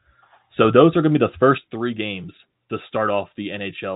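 Right after "going to be the", at 1.58 s, a sudden gain jump drops the level by about 6 dB and it stays down to the end. The speech and the background noise fall together in a single step, with no ramp. This most likely comes from a level setting applied instantly rather than smoothed. A compressor or fade would glide down over tens of milliseconds and would not lower the noise floor in the same instant. The telephone band, with nothing above 3.8 kHz, stays the same across the step.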